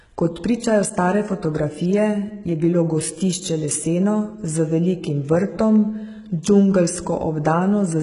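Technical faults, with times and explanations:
Throughout: HE-AAC compression. The treble sounds bright but synthetic, with nothing above 11 kHz. The upper band is likely rebuilt from copied lower bands, so s sounds turn gritty and metallic. A plain low-pass would leave dull treble instead. The heavy damage fits a bitrate near 12 kbps.
6.43 s: pre-echo. A short hiss, about 15 ms long, runs just ahead of a sharp attack, which sounds softened. Coding noise spread across the block fills the silence before the transient. Unlike reverb or a click, the smear comes before the onset rather than after it.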